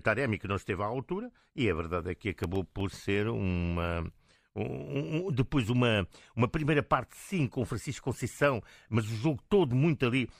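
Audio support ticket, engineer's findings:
Processor overload crackle, 2.39–2.81 s, between "a verdade é que" and "ser uma um um". Audio engine missing deadlines on very short buffers, around a millisecond and a half, a handful in a row, each dropped to silence. Gritty tearing. Not a single dropout, and not level-dependent clipping.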